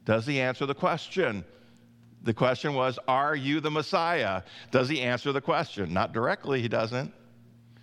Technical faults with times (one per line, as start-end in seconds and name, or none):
1.10 dropped samples
3.67 dropped samples
5.22 dropped samples